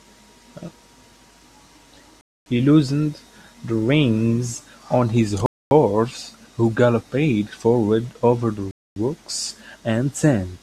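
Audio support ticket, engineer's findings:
Speech drops to dead silence in hard-edged holes, 250 ms each, at 2.21–2.46 s, 5.46–5.71 s and 8.71–8.96 s. Even 3.25 s spacing. No audio missing either side, just pushed later. Gap between chunks. Stream delivered in 3 s chunks, each followed by a quarter-second of silence at the join. Probable component: chunk assembly in playback or storage path, from codec padding or a late start on each chunk.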